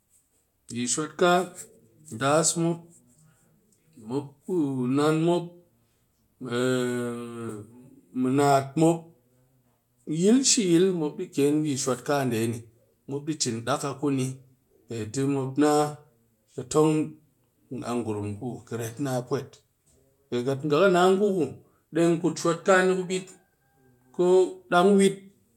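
A speech recording with no technical fault audible anywhere in it. There is nothing to time or trace to a cause.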